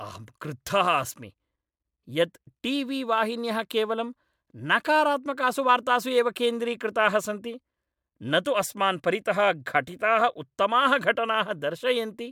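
No technical faults are audible.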